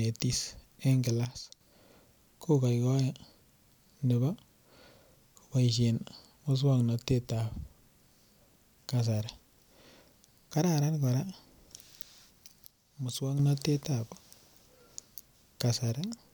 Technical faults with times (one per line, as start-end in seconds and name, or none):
1.25-1.61 one channel drops out
12.66-13.39 one channel drops out